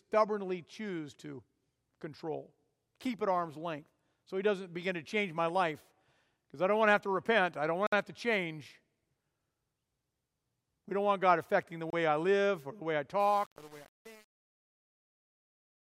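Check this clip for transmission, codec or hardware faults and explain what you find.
Two kinds of fault turn up in the speech: brief dropouts midway and gritty distortion on the closing fade.

Bluetooth stall at 7.87–7.93 s and 11.90–11.93 s: the sound cuts to silence for 58 ms and 28 ms, likely a wireless buffer running dry while delayed packets were resent.

Truncation distortion on a fade from 13.20 s to 15.90 s: the fade-out starting around 13 s, carried at only 7 bits without dither, turns steppy and gritty as it approaches silence.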